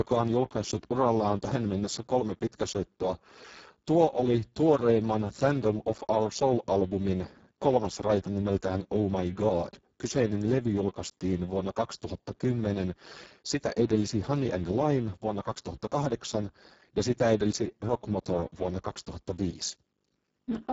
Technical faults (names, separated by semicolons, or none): Speex codec